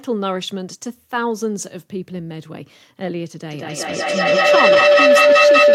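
A microphone-to-loudspeaker loop that gains level on each pass causes feedback howl from 3.51 s to the end. The repeats grow rather than fade, narrowing to a tone around 500 Hz that pulses roughly every fifth of a second and peaks about 11 dB above the speech.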